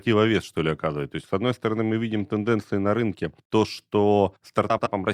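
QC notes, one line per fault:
4.70–4.87 s, frames out of order: two adjacent blocks of 78.4 ms each were decoded in swapped order, so this stretch of speech plays with its halves exchanged. The result is a garbled flutter, and no time is lost.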